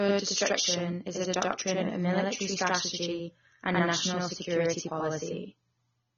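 Channel delay (doubling) runs throughout the speech: one channel lags by 85.33 ms, which fits a 4096-sample buffer, so the mono sum carries a distinct slap echo. Also present from start to finish is dull, smeared speech with nothing above 6.9 kHz and a warbling, fizzy edge on sibilants, likely from AAC compression at a low bitrate around 24 kbps.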